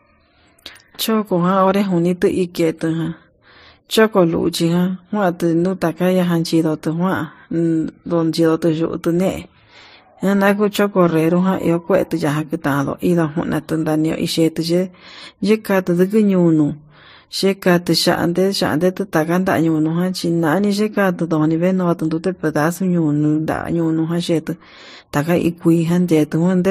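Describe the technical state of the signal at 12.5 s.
At 12.5 s the speech carries the same coded texture heard across the whole clip, likely from transcoding between lossy codecs: an MP3-like stage near 40 kbit/s, then Vorbis at a similar rate, re-encoding the first stage's artefacts. Both layers of artefacts are audible together, and nothing remains above 15.2 kHz.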